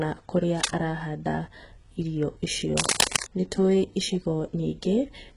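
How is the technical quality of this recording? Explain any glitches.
Not great: the speech is heavily codec-damaged throughout, and there are two scratchy bursts.

Throughout, this sounds like HE-AAC compression at a very low bitrate, maybe 12 kbps. The treble is rebuilt from copied lower bands, so sibilants come out gritty and metallic, with nothing above 15.3 kHz.

From 0.56 to 0.72 s and again from 2.77 to 3.24 s there's cable scratch noise, likely a worn connector being moved. The dense, uneven rustle is roughly as loud as the speech the first time, and somewhat louder the second.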